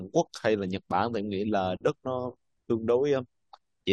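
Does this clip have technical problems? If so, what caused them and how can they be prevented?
No, this clip has no technical problems to report.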